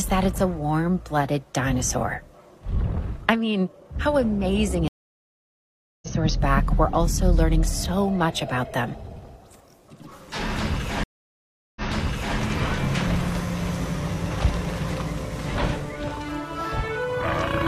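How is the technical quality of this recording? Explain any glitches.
The recording is marred by two stream reconnects. At 4.88–6.09 s the audio drops out for 1.14 s and resumes about one and a half seconds further on, so material is skipped. At 11.03–12.36 s a 0.73 s silence is followed by a restart 0.60 s earlier, so a short stretch repeats. Each time the connection broke, the player went quiet, reconnected and started a new decoder mid-stream, fading in the first frame.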